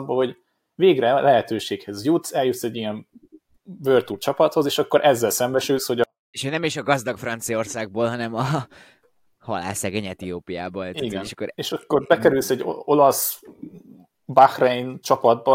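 From 6.04 to 6.34 s the speech abruptly sinks to near silence, still clean but about 48 dB down, then returns at full level. This is a 24-bit alignment error (too quiet): 24-bit samples held in the low bytes of 32-bit words were read as full 32-bit integers.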